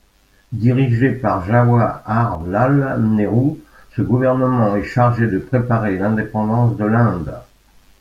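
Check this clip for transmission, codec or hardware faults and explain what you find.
One fault: from 2.35 to 2.41 s the speech dips abruptly by about 6 dB, then returns. This is likely one channel dropping out, so the mono sum briefly loses half its shared signal. Unlike a gain fade, the step is instant and exactly halving.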